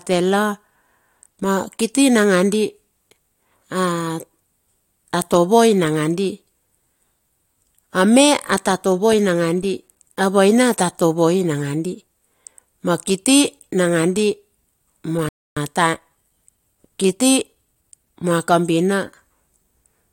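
At 15.29 s the speech cuts out in mid-flow. Silence lasts 280 ms, until 15.57 s. This is a playback stall. The player likely ran short of data or had its thread blocked. The speech then resumes.

From 15.57 s to 18.35 s comes time-compressed catch-up. The player trims its backlog by removing small slices and cross-fading the joins. The speech runs about 1.1 times faster. Pitch stays normal.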